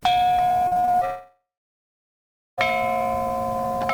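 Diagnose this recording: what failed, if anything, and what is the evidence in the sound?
Repeated packet loss (robotic sound) at the network stage, from 0.67 to 1.03 s. Six short holes, none longer than about 40 ms, leave the sound choppy with pieces missing. Each hole was concealed by extending the previous audio, covering almost half that stretch.

From 1.05 to 2.59 s the sound turns into a fading buzz and then about 1.1 s of near-silence, resuming with that section missing. This is most likely a long network dropout, with the receiver's concealment dying out before audio arrives again.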